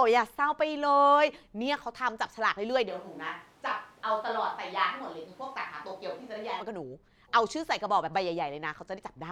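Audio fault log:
2.90–6.60 s, switch to a distant microphone: The speech suddenly turns roomy and hollow, with thinner bass. Level drops roughly 5 dB. Room noise rises to about 25 dB below the speech. The close microphone likely failed, leaving a farther one. It snaps back abruptly.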